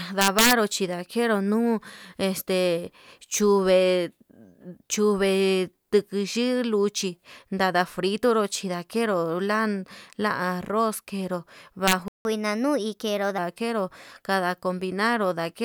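From 0.21 to 0.53 s, just before "chindakeru nuu este", integer overflow produces violent cracks: peaks pushed about 5 dB past full scale wrap to the opposite sign instead of flattening as clipping would. A second, shorter burst at 11.88 to 11.93 s, about 2 dB over, cracks the same way.

A playback stall then silences the speech for 170 ms, from 12.08 to 12.25 s, likely because the player starved of data. Unlike a dropout, the speech resumes exactly where it halted.

Catch-up at higher speed follows from 12.25 to 13.38 s: the speech runs at 1.15 times normal, pitch rising about two semitones together with tempo, before settling back.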